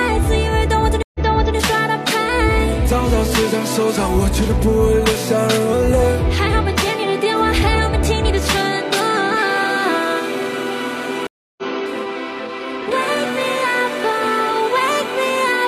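At 1.03 to 1.56 s a stream reconnect drops the sound for 119 ms, then a fresh decoder fades in 418 ms earlier, repeating material. At 11.27 to 11.63 s, after 307 ms of silence, it resumes roughly 0.2 s later. Unlike a plain dropout, the timeline jumps.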